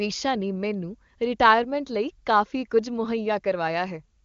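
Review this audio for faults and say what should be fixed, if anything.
Nothing here needs fixing: it's speech carried over the AMR wideband (HD Voice) codec at its top rate of 23.85 kbit/s, and there's no fault to chase down.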